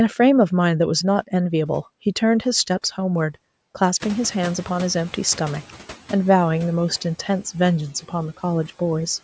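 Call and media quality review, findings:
Noise suppressor catching up, 4.0 to 5.92 s: room noise jumps by about 15 dB around 4 s, leaks through, then drops about 7 dB over 1.9 s as the estimate adapts.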